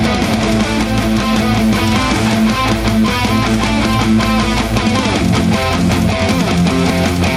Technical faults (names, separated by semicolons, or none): doubled audio track